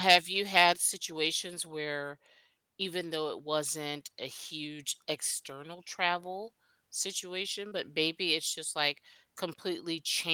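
Short concealed packet loss at 7.67 to 7.74 s, between "huge external travel situation" and "maybe it's just like". About 40 ms of the call's audio did not reach the decoder in time, so the receiver synthesised roughly 38 ms to cover the hole, extending the preceding sound's pitch or its noise shape, then crossfaded back into the real signal. It comes through as a brief smear or wobble where the speech momentarily blurs.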